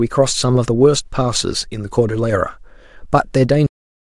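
A speech clip whose sound stops abruptly mid-utterance at 3.67 s and drops straight to digital silence with no decay: a cut-off end, because the final buffers were never written or played.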